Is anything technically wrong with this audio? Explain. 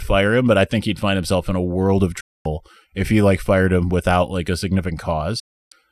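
Yes. Two digital broadcast dropouts, at 2.20–2.46 s and 5.39–5.72 s: the receiver lost good frames and muted with a quick 8 ms fade, leaving 0.24 s and 0.31 s silent holes in the speech.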